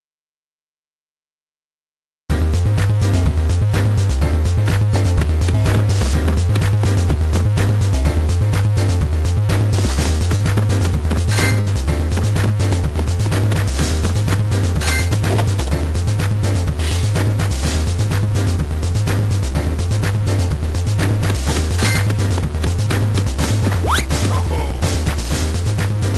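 Short concealed packet loss at 9.93, 10.18, 10.36 and 11.22 s: gaps of 20 to 40 ms were filled by extending the preceding sound, heard as brief smears or wobbles. A burst of packet loss at 11.61 to 11.68 s drops about 60 ms; the concealment holds and fades the last sound before the audio resumes further on, through a call codec whose top end stops near 12 kHz.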